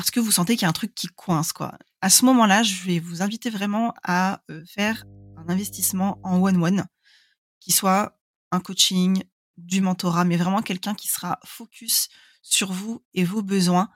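From 4.87 s to 6.58 s, right after "vous inviter vraiment à", mains hum appears: a steady 50 Hz tone with low harmonics, roughly 25 dB below the speech, from power-line coupling through a ground loop or nearby transformer.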